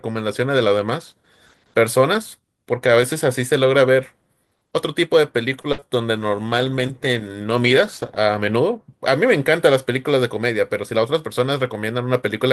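At 5.61 s there's a short stall from a late packet. A packet was late, the jitter buffer ran dry, and the receiver held the last sound for about 28 ms until it arrived. Nothing is lost, but that bit of speech drags with a faint buzz, and everything after lands about 28 ms later.

Right after, from 5.72 to 5.89 s, comes a burst of packet loss. About 60 ms of the speech never made it, and the receiver papered over the hole by extending the last sound and fading it down. You hear a held, dimming buzz or hiss, then the talk resumes a little further on.

Inside that burst, around 5.80 to 5.84 s, there's also a short concealed packet loss of about 20 ms. The decoder patched it by guessing from the preceding sound and blending back in, so it comes across as a quick smear or wobble rather than a clean cut.

Then, from 6.18 to 8.63 s, there's a call bitrate drop. The bandwidth estimate sagged and the encoder coded much more coarsely, which fits a fall from 32 to 14 kbps held for about 2.4 s. 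The speech turns rough and watery until the bitrate recovers.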